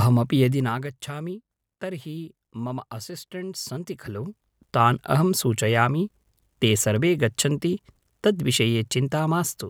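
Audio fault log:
0.40 to 0.96 s, zipper noise: the speech level drops by roughly 15 dB in 2 dB jumps, about ten a second. Each jump is applied with no smoothing. So each leaves a small click, heard as a rapid ticking riding on the speech.
3.58 to 4.84 s, zipper noise: the level climbs by roughly 15 dB, again in 2 dB steps, about five a second. The slower steps give a more spaced ticking. It ends just before "अहं सूचयामि ते सर्वे".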